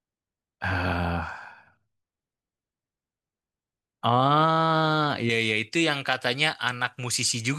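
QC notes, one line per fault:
5.30–7.58 s, pre-emphasis left on: from 5.30 s to the end of the clip the speech turns thin, bright and sibilant, with the top end lifted by about 11 dB at 10 kHz relative to 1 kHz. The treble boost applied before recording or transmission was never undone by the matching de-emphasis on playback, so high frequencies stay exaggerated against the body of the speech. The shape of the lift fits a J.17 emphasis curve.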